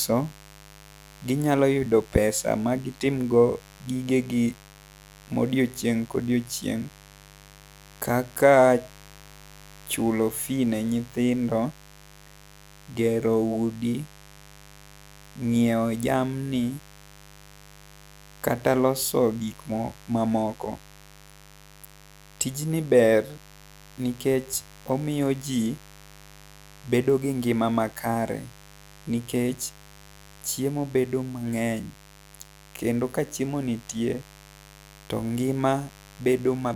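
A mains buzz runs under the speech from start to finish: sharp switching spikes at 50 Hz mains let in harmonics climbing into the kilohertz range, heard as a steady raspy drone roughly 25 dB below the speech. A spectrogram shows evenly stacked horizontal lines.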